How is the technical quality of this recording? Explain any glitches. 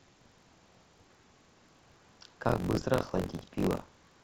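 The quality's let down by buffer tearing running through the whole speech clip. Writer and playback pointers have slipped, so roughly a fifth of each buffer replays audio about 40 ms old, hard-spliced on both sides. That gives a robotic 46.9 Hz buzz, which fits a 1024-sample buffer.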